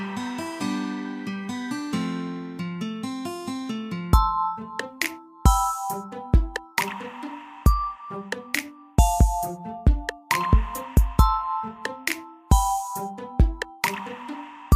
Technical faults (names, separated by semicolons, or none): none